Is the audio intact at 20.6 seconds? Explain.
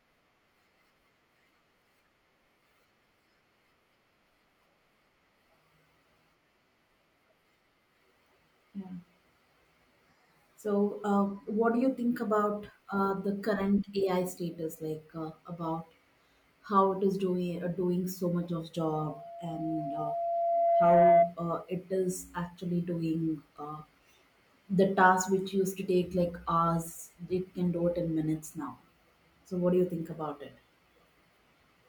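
No. At 20.6 seconds the clip is in the middle of a loudspeaker feedback squeal that runs from about 18.84 to 21.35 seconds. A microphone is picking up the loudspeaker it drives, and at 681 Hz the loop gain has gone above unity, so that tone keeps reinforcing itself. It builds over roughly two seconds into a squeal sitting around 10 dB above the speech, dominating the sound at that moment.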